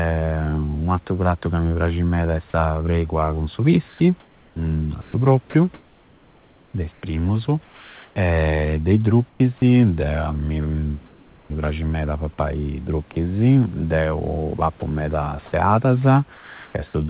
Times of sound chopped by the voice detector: 5.02-8.16

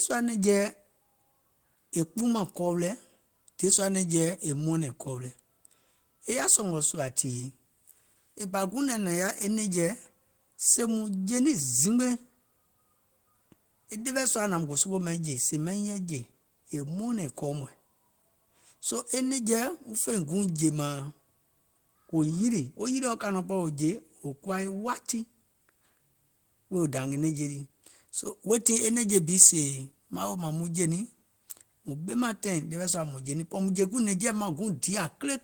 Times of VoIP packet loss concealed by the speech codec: none

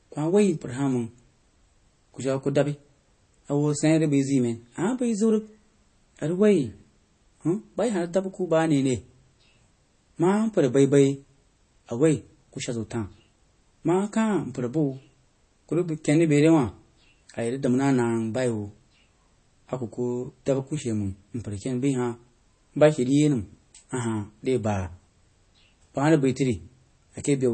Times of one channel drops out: none

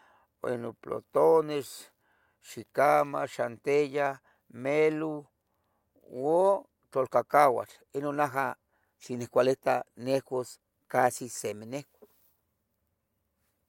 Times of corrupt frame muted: none

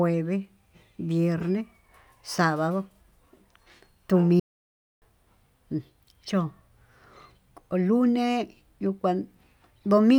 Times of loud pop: none

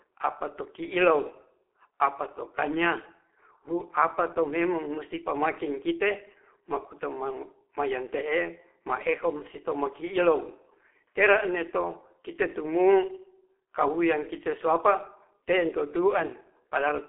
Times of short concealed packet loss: none

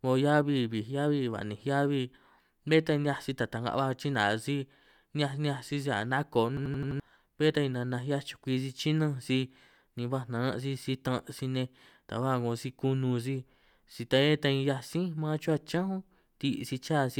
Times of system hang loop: 6.57-7.00

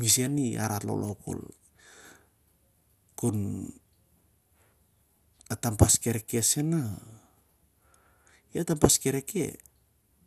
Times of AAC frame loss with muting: none

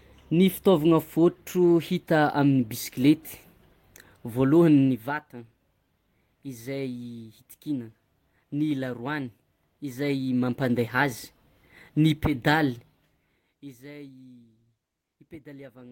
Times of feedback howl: none

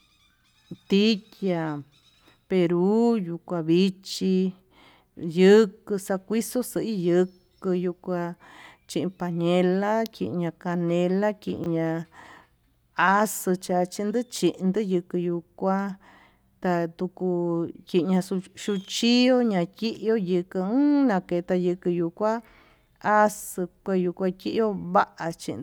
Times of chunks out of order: 11.58-11.66

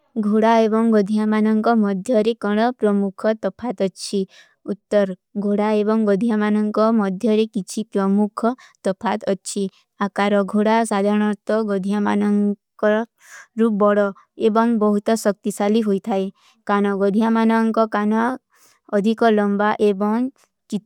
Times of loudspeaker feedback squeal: none

